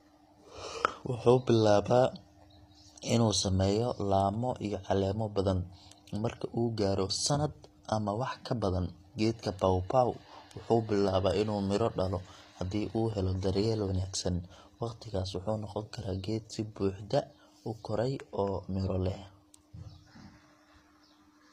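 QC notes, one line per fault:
throughout, HE-AAC compression: gritty, lispy treble on this speech, nothing above 14.9 kHz; likely spectral band replication copying lower bands upward. Spectrogram shows smeared, repeated high-band patches above the crossover.
12.98–14.05 s, train of clicks: regular ticking at 13.2 per second, roughly fifteen pulses near signal level, starting after "inuu midho dhalo haddii"; likely interference. Waveform shows evenly spaced, similarly shaped spikes.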